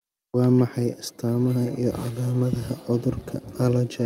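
From 1.61 s to the end at 4.05 s, the speech carries a feedback echo between two devices. A second device in the room replays the call, and this microphone picks it up again. Its echo canceller misses that copy. Repeats arrive about every 400 ms, roughly 24 dB below the speech.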